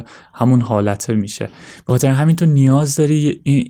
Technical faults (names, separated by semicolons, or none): lost packet rebuilt from error correction